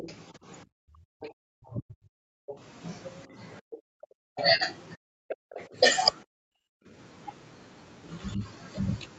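From the start to 5.65 s a second, fainter voice runs under the speech, roughly 15 dB below it. This is the other side's voice leaking through, likely loudspeaker echo the echo canceller failed to subtract. On a spectrogram it shows as a faint, separate set of harmonics overlapping the main talker's.

Over the same span, to 5.77 s, the main speech keeps dipping and breaking up, for around two seconds in total, sometimes falling by about 40 dB. The cause is likely speech suppressed in double talk: with both sides active, the canceller attenuated everything. A waveform shows the envelope collapsing in chunks.

At 1.33–1.40 s the room sound drops out by about 40 dB. This is background gated by the echo canceller, which clamped the microphone while the loudspeaker played. The spectrogram shows a short vertical gap in the noise floor.

A longer gate of the same kind hits 6.24–6.88 s, again about 40 dB deep. 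The background vanishes abruptly and then returns as the canceller releases. It leaves a clear blank band across all frequencies up to the 8 kHz call-codec ceiling.

At 8.36–8.43 s the speech briefly sags by around 10 dB, likely a short recurrence of the double-talk suppression. It is a shallow notch in the waveform envelope.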